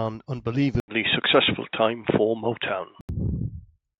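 An input switched to a poorer device from 0.8 s to 3.09 s: an 80 ms gap opens at 0.8 s, and the speech then turns dull and boxy, with nothing above 3.8 kHz, a level shift of roughly 5 dB, and a faint new background noise well below the speech. The likely cause is the recording moving to a narrower-band microphone or a headset's call profile. Full bandwidth returns at 3.09 s.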